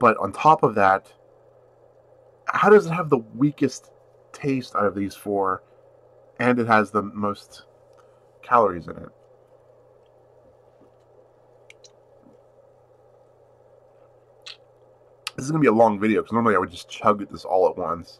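Nothing stood out as a technical fault on listening.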